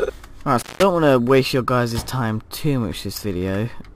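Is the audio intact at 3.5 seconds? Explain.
Yes, the audio is intact at 3.5 seconds, with no dropout, click, distortion or other fault at that moment.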